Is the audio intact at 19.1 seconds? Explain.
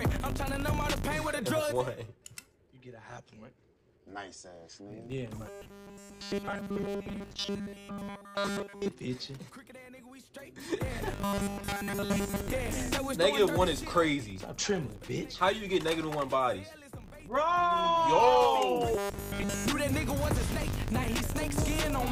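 No. From 18.94 to 19.68 s there is robotic sound from repeated short buffers. New audio is likely arriving too slowly, so the playback fills the gap by looping a short stretch of what it already has. Across this span essentially all of the output is repeated material, and the loop length points to a buffer of about 5 ms. The repetition stamps a fixed 200 Hz pitch onto the sound, turning it into a rigid, metallic buzz that only loosely tracks the original.

The filter restarted on every block also affects this moment, as it does the whole clip. The filter drops its memory at each block boundary and begins again from silence, so every block opens with a small transient. These recur at 50 Hz and form a low tick-buzz whose loudness rises and falls with the level of the sound.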